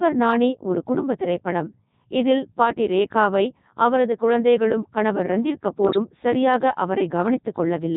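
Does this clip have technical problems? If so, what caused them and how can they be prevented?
Yes. The whole clip is heavily marked by the Codec 2 vocoder. This speech is not carried as a waveform. Only pitch, voicing, energy and a coarse spectral envelope survive, and the decoder rebuilds the voice from sine waves. The result is robotic and buzzy throughout. The sound fits Codec 2 at its top rate of 3.2 kbit/s, so even its best mode gives this synthetic character. To prevent it, use a higher-rate waveform codec, such as Opus, wherever bandwidth allows.

From 5.84 to 5.98 s, just after "அவரது குழந்தைகளும் கணவர் ரந்தீர்", bit errors on digital voice radio break the synthesis. At such a low rate, every bit helps set a whole frame's pitch, level, voicing or spectrum. Flipped bits make the voice jump in pitch and loudness and warble into brief gibberish. The length points to about half a dozen damaged frames and an error rate of around three percent. 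To prevent it, keep the link inside solid coverage and use stronger forward error correction.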